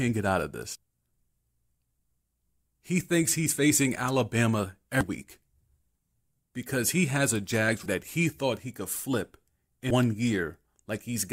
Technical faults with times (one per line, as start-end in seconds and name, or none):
0.75 damaged data in a compressed stream
5.01 damaged data in a compressed stream
7.82-7.86 damaged data in a compressed stream
9.90 damaged data in a compressed stream